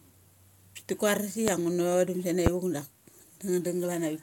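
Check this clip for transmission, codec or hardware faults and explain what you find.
Two loud pops are present in the speech. From 1.48 to 1.51 s, just after "ti kuaras", and from 2.46 to 2.50 s, just before "vuk dak", a single sharp pop about 20 dB above the speech sits on top while the speech continues. A transient voltage pulse, likely from a plug, switch or static discharge, is the cause.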